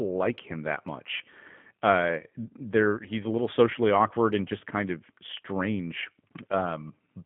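From start to end the speech carries plainly audible G.729 codec damage: the sound is squeezed to about 150 Hz–3.4 kHz and rebuilt from a filter, pitch predictor and sparse pulses, giving a rough, buzzy, synthetic edge, which fits an 8 kbit/s model-based coder rather than simple band-limiting.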